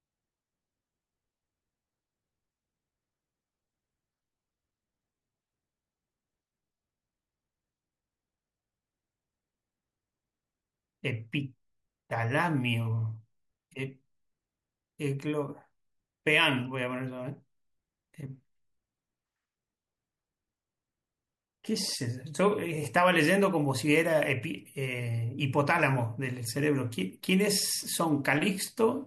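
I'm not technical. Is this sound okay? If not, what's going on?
Yes, this recording is fine; nothing here needs fixing.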